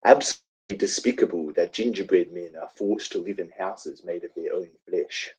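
At 0.31 s the speech breaks off and does not return until 0.71 s. The last sound is stretched into a fading buzz, which decays to about 260 ms of near-silence, and roughly 380 ms of speech is simply gone when the audio resumes. This is the pattern of a long network dropout, likely a stretch where no packets reached the receiver and its concealment ran out before delivery recovered.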